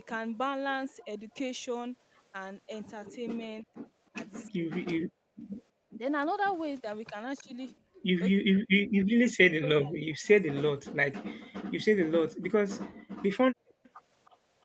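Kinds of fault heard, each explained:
Speech suppressed in double talk: with both ends talking at once, the echo canceller likely mistook this talker for loudspeaker echo and pulled the voice down. There is a brief dip of roughly 10 dB near 1.04 s. Deeper cuts of up to roughly 40 dB come in pieces across 3.19–7.45 s and 8.4–11.2 s.
Background gated by the echo canceller: while the far side played through the loudspeaker, the canceller clamped the microphone hard. The room sound drops about 22 dB for roughly a tenth of a second near 5.4 s. Across 7.8–9.17 s it drops by up to about 32 dB, in pieces totalling under half a second.
Echo leak: a faint delayed copy of the voice, lagging about 313 ms, comes back at roughly 30 to 35 dB below the speech. It is likely what the far side's canceller let through from its loudspeaker. It is heard briefly near 7.4 s and again across 13.83–14.31 s.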